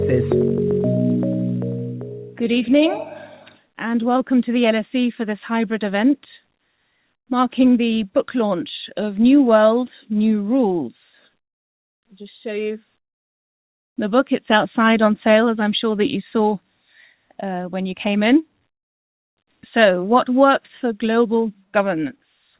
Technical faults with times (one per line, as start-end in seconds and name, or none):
none